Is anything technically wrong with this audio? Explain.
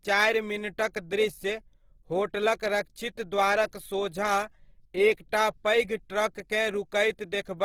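Yes. Throughout the speech there is plainly audible Opus compression damage, most likely from encoding at a low bitrate, around 16 kbps. The sound is rough and grainy, with a noisy texture where detail should be. The music-style (CELT) coder keeps each band's energy and fills starved bands with noise or folded copies of lower bands. A spectrogram shows fullband content up to about 20.2 kHz, with smeared, noise-like texture in the upper bands.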